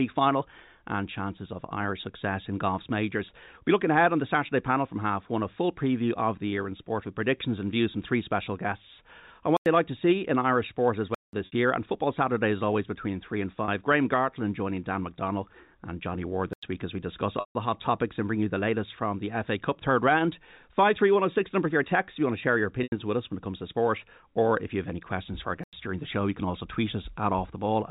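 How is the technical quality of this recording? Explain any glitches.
Technical quality is marred by two recurring dropout faults over a telephone-band G.711 path whose 4 kHz ceiling can be heard.

Blocks of digital silence occur at 9.57–9.66 s, between "three special guests on" and "like to see in", and at 11.15–11.33 s, 16.53–16.63 s and 25.64–25.73 s. The output buffer likely went unfilled, so the audio drops abruptly to zeros and returns. This produces holes of about 93 ms, or 186 ms at 11.15 s, which fits 4096- and 8192-sample buffers.

Packet loss with pitch repetition occurs at 11.46–11.52 s (60 ms), at 13.65–13.68 s (30 ms) after "always between three and", at 17.40–17.55 s (150 ms), and at 22.83–22.92 s (90 ms) between "want to share your" and "with us when it". The receiver loops the last pitch period to fill each gap. The short losses sound buzzy and held, and the 150 ms loss fades toward silence before the speech resumes.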